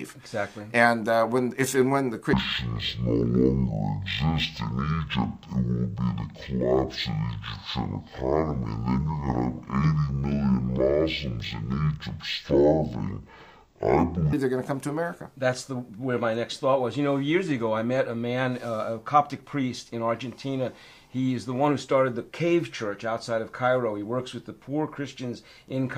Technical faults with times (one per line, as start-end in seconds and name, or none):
2.33-14.33 stereo read as mono